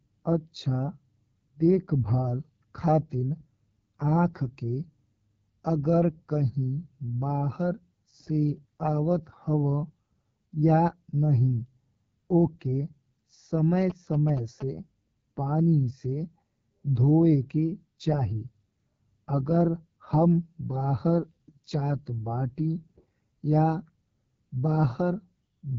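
Right through the clip you can hear the AMR wideband (HD Voice) codec working near the bottom of its range. The speech comes out rough and raspy, which fits the 8.85 kbit/s mode, and there's nothing above 7.6 kHz.

From 13.81 to 14.62 s there are GSM signalling bursts: a nearby 2G phone's radio pulses get rectified by the audio circuit, giving a galloping dit-dit-dit of short 217 Hz buzzes, sitting well below the speech.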